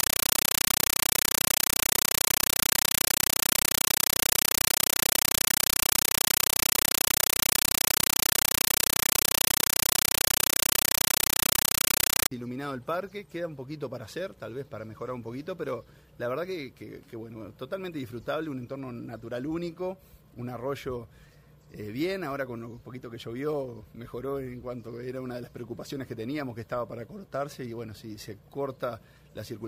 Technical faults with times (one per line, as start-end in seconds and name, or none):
0.00-12.31 compressed stream played as audio